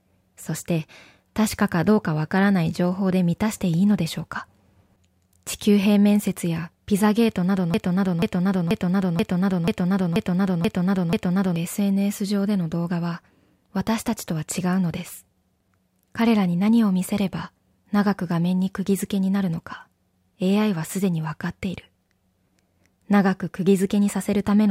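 A broken-record loop runs from 7.74 to 11.56 s: a 0.48 s fragment of speech repeats eight times, likely from a stalled stream resending its last buffer, losing the intended audio.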